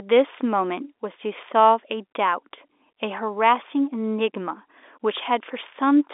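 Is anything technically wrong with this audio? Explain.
No, nothing here is technically wrong. The speech comes through G.711 telephone coding, so it is confined to the usual line band of roughly 300 Hz to 3.6 kHz with nothing above 3.8 kHz, which is simply how a telephone channel sounds.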